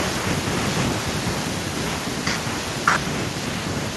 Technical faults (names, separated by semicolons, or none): none